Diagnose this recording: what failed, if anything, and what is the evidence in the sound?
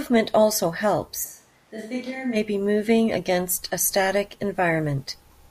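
From 1.26 s to 2.34 s the speech turns abruptly hollow and roomy, about 10 dB quieter, thinner and noisier, then snaps back before "be moving against a". At capture, this is likely a switch to a distant microphone after the close one dropped out.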